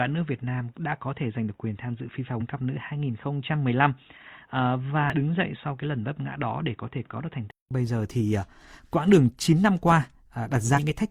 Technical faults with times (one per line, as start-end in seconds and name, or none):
0.00-7.71 input switched to a poorer device
5.10-5.15 damaged data in a compressed stream
10.73-10.78 damaged data in a compressed stream